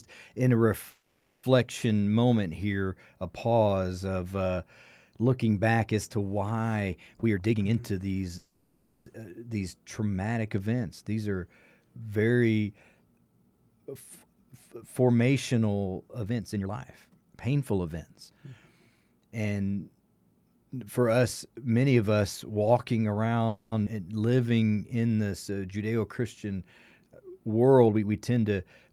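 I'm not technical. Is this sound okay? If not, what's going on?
No, it has a few hiccups typical of a shaky internet call.

Call audio freeze: at 0.89–1.45 s (right after "in a"), 8.38–9.08 s and 23.48–23.74 s, the sound stalls into a fading buzz, then resumes where it stopped. Likely cause: packets arriving late.

Jitter buffer speed-up: the audio rushes to catch up, at 7.15–8.30 s (about 139% speed), 13.18–19.05 s after "are very" (113%) and 27.86–28.90 s (115%). Pitch stays normal.

Skip ahead: at 23.86–23.89 s, just after "many of us walking", roughly a tenth of a second is dropped and playback jumps straight on.

Jitter buffer slow-down: at 24.25–25.09 s the sound drags at about 87% speed, stretched by 114 ms, same pitch but drawn out.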